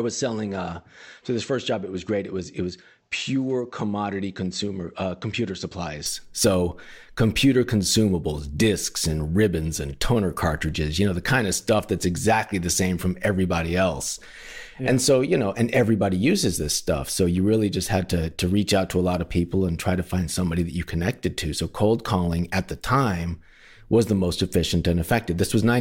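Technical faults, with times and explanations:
0.00–6.06 s, input switched to a poorer device: the speech is dull and band-limited, with nothing above 8 kHz, sits roughly 5 dB quieter, and carries a faint noise floor about 50 dB below it, then brightens at 6.06 s with no silence at the change. The likely cause is capture through a narrower-band input before the switch to a fuller one. A spectrogram shows a flat ceiling at 8 kHz that lifts at the switch, and the waveform steps up in amplitude there.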